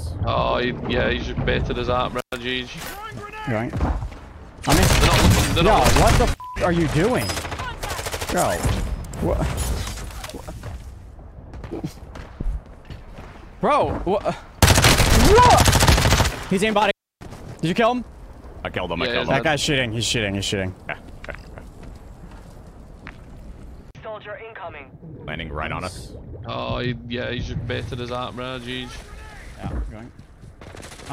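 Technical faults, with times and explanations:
2.19–2.34 s and 16.69–17.40 s, intermittent contact: a loose plug or cable connection briefly opens, dropping the signal for about 116 ms and then about 299 ms. Crackle marks each break and reconnection, and faint hiss remains while the line is open.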